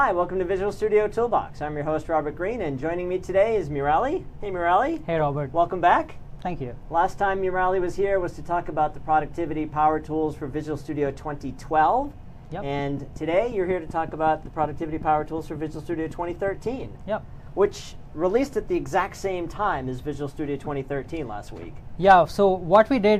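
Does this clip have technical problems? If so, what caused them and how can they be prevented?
Yes. A repeating pulse, likely from interference by nearby equipment or a faulty connection or power supply, entered the signal path. From 12.79 to 16.67 s it lays a train of clicks over the sound: about twenty near-identical pops, evenly spaced at 5.4 per second, peaking about 5 dB above the surrounding level. Securing connections and routing cables and power supplies away from other equipment would prevent this.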